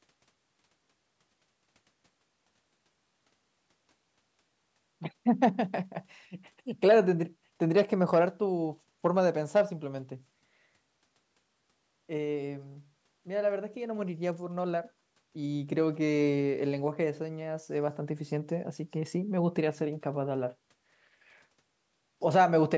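No faults in this speech: it has passed through a call's microphone processing, whose high-pass trims the lowest bass and whose band stops at 8 kHz, both normal for that path.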